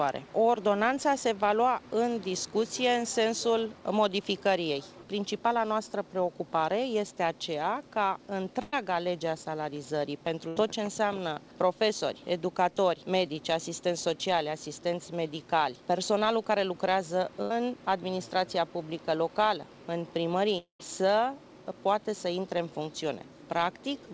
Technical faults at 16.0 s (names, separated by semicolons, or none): none